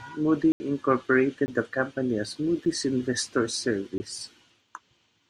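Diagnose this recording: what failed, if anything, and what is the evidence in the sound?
The speech is broken by abrupt dropouts: an 80 ms hole from 0.52 to 0.60 s, a 20 ms gap at 1.46 to 1.48 s just before "the company as", a brief tick at 2.66 s right after "the company as", and another 20 ms gap at 3.98 to 4.00 s. These are blocks of digital silence at the driver or buffer stage. Samples were replaced by zeros with no fade, which fits the output buffer not being filled in time.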